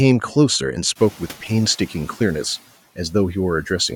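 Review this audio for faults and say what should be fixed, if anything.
From 0.95 to 1.43 s, suddenly louder room noise comes through, then drops about 5 dB: the noise suppressor catching up, its estimate lagging 480 ms. Faster noise-estimate tracking when the background level jumps would shorten this lag.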